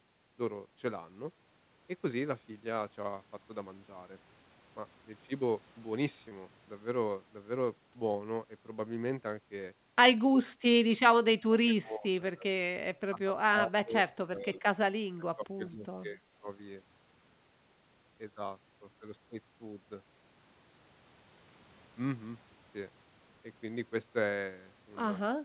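At 6.29 to 6.32 s, short concealed packet loss: about 20 ms went missing and was patched by extending the preceding sound, leaving a brief smear rather than a silent gap.

At 10.45 to 10.65, 11.45 to 12.07, 12.29 to 12.47, 13.08 to 13.95, 14.27 to 14.64, 14.92 to 15.86, 16.08 to 16.21 and 25.19 to 25.45 s, the speech dips by about 10 to 35 dB in uneven chunks. These drops are most likely speech suppressed in double talk, where an echo canceller ducks the talker. Unlike packet loss, there is no filled-in sound, only repeated attenuation within the call's band, which stops at 4 kHz.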